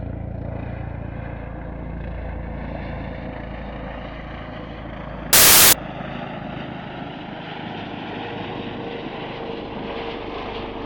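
At 5.33 s the audio breaks into a burst of loud, broadband hiss that lasts until 5.73 s, roughly 0.4 s, and then clears. This is samples built from the wrong bytes: over that stretch the bytes making up each sample were assembled incorrectly, whether offset by one byte, taken in swapped order or read with the wrong alignment. The rapidly varying low-order bits end up as the most significant part of each value, so the waveform is replaced by loud, harsh broadband noise.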